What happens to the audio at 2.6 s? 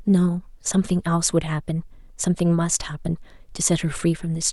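Nothing goes wrong at 2.6 s: the speech continues there without any dropout, click, glitch or other fault.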